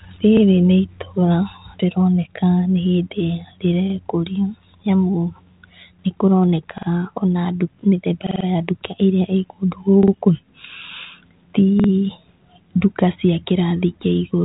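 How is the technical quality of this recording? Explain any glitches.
The speech stutters in six places because of repeated buffer faults. It plays through a G.726 ADPCM telephone path at 32 kbit/s, which passes nothing above 3.8 kHz.

The repeated buffer faults fall at 0.37, 3.90, 6.78, 8.27, 10.03 and 11.80 s. New audio arrived late, so the device replayed its last 46 ms piece, which fits a 2048-sample buffer. The piece plays once extra at 0.37 and 3.90 s, twice extra at 6.78, 10.03 and 11.80 s, and four times extra at 8.27 s, where the stutter is longest. On a waveform or spectrogram, each fault shows as identical 46 ms blocks side by side, with hard discontinuities at the joins.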